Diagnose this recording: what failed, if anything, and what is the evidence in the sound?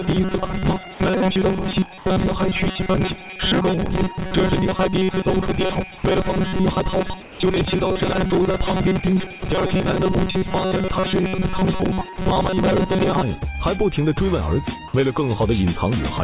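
From about 0.01 s to 13.23 s the sound carries a rigid, metallic buzz fixed at 188 Hz that tracks the material only loosely. This is robotic sound from repeated short buffers, at the driver or buffer stage. It is likely caused by audio arriving too seldom, so the playout side loops the last chunk of roughly 5.3 ms while the real audio is skipped. That period sets the 188 Hz tone, and most of the passage is made of repeats.

At 1.98–2.06 s (80 ms) and 7.22–7.40 s (180 ms) the background turns flat and featureless and drops about 4 dB. This is comfort noise in place of the background, from call processing. The sender likely stopped transmitting during quiet stretches, where the background sits about 20 dB below the loud parts, and the receiver filled each pause with synthetic noise shaped like that background. The G.711 mu-law path, which carries nothing above 4 kHz, frames both fills.

At 5.98–6.04 s and 12.16–12.18 s the sound gives way briefly to steady noise and then returns. 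This is sound dropped by the voice detector, also in call processing. The detector likely misjudged low-level sound as background and cut transmission. The receiver substituted comfort noise for 60 ms and 20 ms respectively. About 30 ms of real sound is lost in the first gap and about 10 ms in the second.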